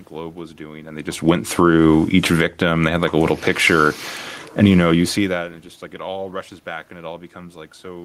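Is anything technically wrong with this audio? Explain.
Yes. The automatic gain control keeps adjusting the level, so the speech and the room noise behind it pump up and down together.

Automatic gain falling happens at 1.15–1.61 s (after "was doing and they"), 2.19–2.63 s, 3.27–3.79 s and 4.48–6.38 s (ending before "back and it"). The control judged the input too loud and pulled its gain down by about 5, 9, 4 and 4 dB. Voice and background sink together.

Automatic gain rising runs from 1.51 to 4.22 s, adding about 6 dB, and again at 4.80–5.26 s, adding about 5 dB. The second rise follows an input drop of about 24 dB, which the control judged too quiet. Voice and background swell together over these spans.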